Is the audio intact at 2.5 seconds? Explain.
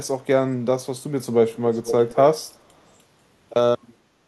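No, there's a brief echo leak right around there, from 2.48 to 2.52 s. You get a faint, delayed copy of the speech trailing the original by about 490 ms, sitting very low, way down under the direct voice, so it's just a quick ghostly scrap. It's likely coming from the far end playing the call on a speaker, where the echo canceller didn't fully scrub what its mic picked up and sent that remnant back.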